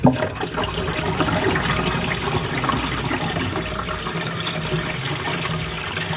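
No technical faults are audible.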